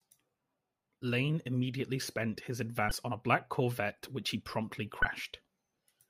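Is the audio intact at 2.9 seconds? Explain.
No, at 2.88 to 2.91 s there's damaged data in the compressed stream: the decoder loses sync on the corrupted frames and resyncs, leaving a brief chirp, click or short hole in the speech.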